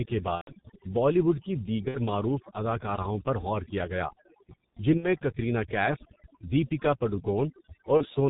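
Throughout the speech, overdone noise removal has pushed individual frequency bands down wherever they sat near the estimated noise floor, taking quiet speech detail with them. The background drops and breaks up into twinkling specks.

The whole clip also carries heavy G.723.1 codec damage, consistent with its 6.3 kbit/s mode. Nothing survives above 4 kHz and the slowly updated voice model smears transitions, so the speech sounds muffled and hoarse with blurred consonants.

VoIP packet loss concealed by the speech codec appears at 0.35–0.53 s, 1.88–1.98 s, 4.97–5.08 s and 7.97–8.06 s. The gaps fit about 120 ms, 60 ms, 60 ms and 30 ms of lost audio. In each, the decoder extends its last pitch and filter state at falling gain, giving a buzzy tone or coloured noise that fades before the voice recovers.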